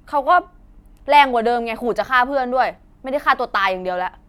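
No technical faults can be heard in this speech clip, so there is nothing to describe in time order.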